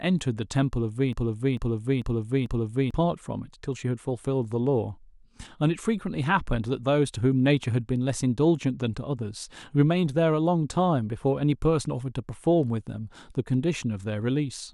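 From 1.13 s to 2.91 s the speech is caught in a broken-record loop: a fragment of about 0.44 s plays four times back to back, each repeat identical, before normal audio resumes. The likely cause is a stalled player or stream that kept resending the last piece it held, so the speech meant for those 1.8 s is gone. Unlike an echo, the repeats don't fade or overlap, and unlike a stutter, each one is a full, exact copy.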